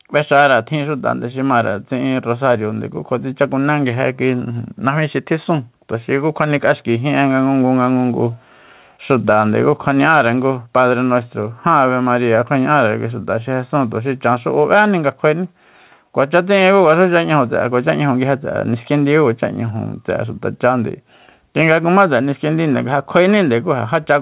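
Speech with gain pumping throughout the whole clip: the level is pulled down by around 5 dB each time the talker gets loud, so soft and loud passages sit unnaturally close in level and the sound feels squashed. The likely cause is input gain set far too high, with a fast limiter or compressor clamping down on each loud moment. On a waveform this shows as peaks flattened to a near-constant ceiling. The audio carries call-codec coding noise, and nothing appears above 4 kHz, a hard horizontal cutoff on the spectrogram that fits a narrowband telephone codec such as G.711.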